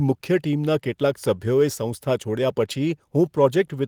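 No audible technical faults anywhere in the speech recording.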